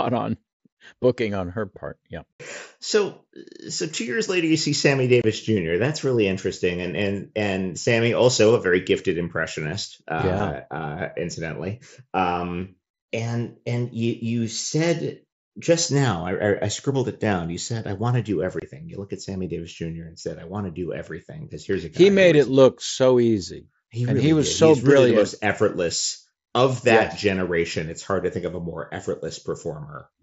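Abrupt holes cut the speech at 2.34 to 2.40 s, 5.22 to 5.24 s, 10.39 s just after "very gifted impressionist uh", and 18.60 to 18.62 s just after "I want to do". This is unconcealed Bluetooth headset packet loss: short voice packets on the wideband mSBC link never arrived, and silence or an idle pattern filled each gap.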